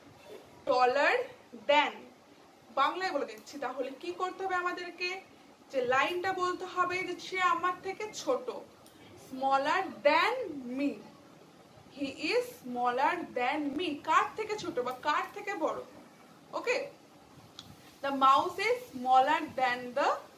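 At 0.67 to 0.69 s there is a brief scrambled flicker, and at 13.73 to 13.76 s a slightly longer jumbled stutter. Both are chunks out of order. A 10 ms block of audio arrived late and was played after the blocks that should follow it: one chunk late at 0.67 s and two chunks late at 13.73 s. No audio is missing, but the reordering creates abrupt joins.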